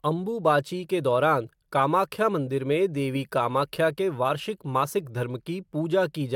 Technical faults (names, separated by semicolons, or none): none